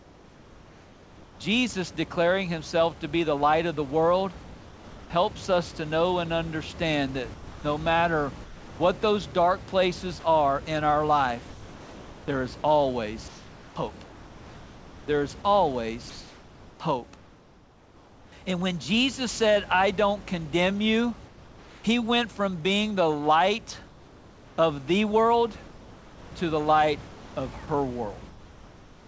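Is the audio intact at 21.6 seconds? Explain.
No. From 21.28 to 21.84 s, the room background gives way to comfort noise, likely because discontinuous transmission paused sending and the receiver synthesized filler about 3 dB quieter. A spectrogram shows a smooth, uniform noise band instead of textured room noise.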